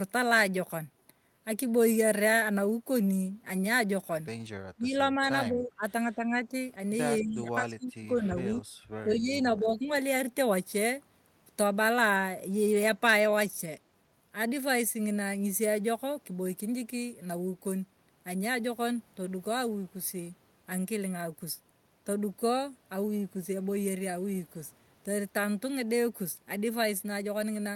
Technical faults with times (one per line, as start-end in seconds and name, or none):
4.75-6.52 speech suppressed in double talk
7.21-8.65 speech suppressed in double talk
9.04-9.90 speech suppressed in double talk